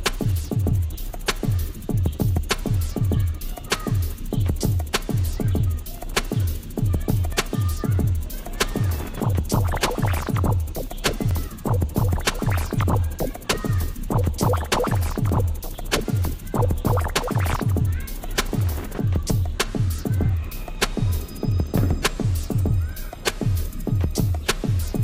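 At 15.3 s there is a tiny skip where an overlap between stream segments occurs. Two segments, about 4.0 s each, claim the same span of time, and the overlapping stretch is trimmed even though the sound was not really doubled, so roughly 12 ms of real audio disappears and the waveform jumps.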